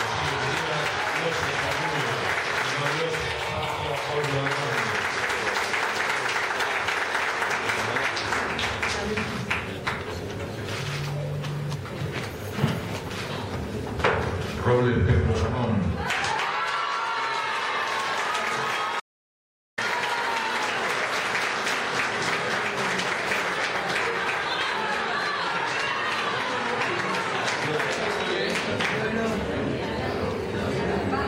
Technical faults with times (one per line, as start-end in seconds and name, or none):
19.00-19.78 audio dropout to silence